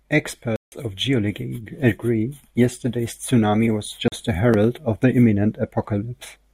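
A hard-edged gap cuts the speech at 0.56 s for 160 ms, and a shorter 40 ms hole follows at 4.08 s. Both are blocks of digital silence: runs of samples replaced by zeros, consistent with output buffers not being filled in time.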